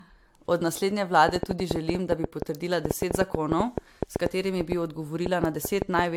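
Generation loss runs throughout the speech, likely from repeated lossy coding: the band stops near 19.3 kHz, and the swirly, hollow smearing and softened consonant attacks point to AAC-LC at 96 kbit/s re-encoded about four times, each pass adding fresh quantisation damage.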